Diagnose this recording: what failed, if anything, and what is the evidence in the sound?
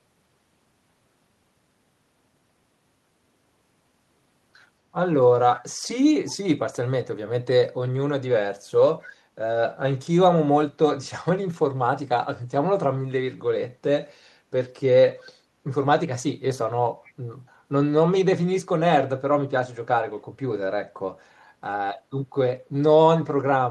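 Echo leak in call processing. Faint copies of the speech return 241 ms late at 5.55, 9.01, 15.19 and 17.04 s, likely from incomplete echo cancellation.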